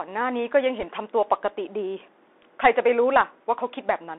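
From start to finish the speech sounds thin and boxed-in, confined to roughly 300 Hz to 3.6 kHz, with scratchy s sounds, a grainy hiss underneath and roughness on loud, bright moments. That is the Bluetooth CVSD headset codec. It sends only one bit per sample saying up or down, consistent with a 64 kbps headset link, and when the adaptive step cannot keep pace with fast, strong high content, the waveform smears into distortion.

Between 0.80 and 0.85 s a brief rushing crackle sweeps over the speech. It has no sharp pop or loud click, just a fizzy burst of noise that fades out quickly. These are bit errors on a Bluetooth voice link, with the error density sounding like something around 3 percent. Because each CVSD bit only nudges the signal by one small step and the decoder drifts back on its own, the corrupted bits turn into texture rather than spikes.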